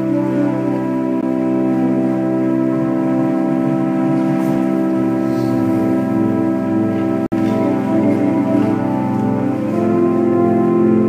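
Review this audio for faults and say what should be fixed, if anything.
Gap between stream segments at 1.21 s and from 7.26 to 7.32 s: the timestamps of adjacent 6-second segments leave holes of about 15 ms and 57 ms, which the player fills with hard-edged silence, briefly cutting off the sound without losing any audio. Align segment timestamps so each begins exactly where the previous one ends.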